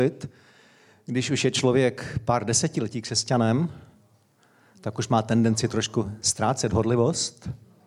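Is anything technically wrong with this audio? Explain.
No, there is nothing technically wrong with this audio.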